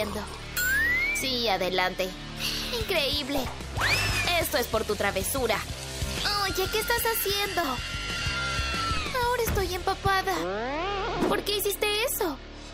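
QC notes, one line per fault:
3.38 s and 8.97 s, DC step: At each point the waveform's zero line jumps abruptly to a new offset, then drains back toward centre at a rate matching a 2 Hz high-pass, a time constant of roughly 80 ms. The sudden shift in baseline carries energy down into the sub-audio and low bass range, so each event is heard as a dull thump or click. The programme sound continues through both steps with no change in level or tone.
7.61–7.65 s, short concealed packet loss: About 20 ms of audio failed to arrive at the decoder in time, and the receiver covered the gap with roughly 18 ms of synthesised continuation before cross-fading back into the real signal. The concealment extrapolates from the last received audio, repeating its pitch structure where it was tonal or shaping noise where it was not. That produces a brief smeared, wobbly patch.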